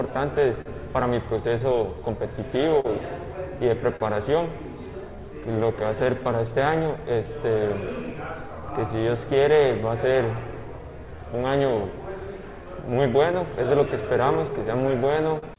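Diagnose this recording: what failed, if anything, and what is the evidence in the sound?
At the network and buffer stage, clock drift between sender and receiver: the sender's clock runs roughly 4% slow, so the jitter buffer keeps draining throughout.

Repeated timing corrections from 0.11 to 15.29 s stretch the audio to 97% speed, adding around 0.4 s, heard as small uneven hiccups and a slightly dragging tempo.

Scattered short gaps at 0.61–2.86 s and 12.31–15.44 s come from late packets, each patched by continuing the last sound. They leave brief ticks and smears, the longest roughly 40 ms.

A short stall from a late packet at 3.96–4.02 s: the buffer ran empty and the receiver held the last sound for 37 ms, giving a slight buzz or dip.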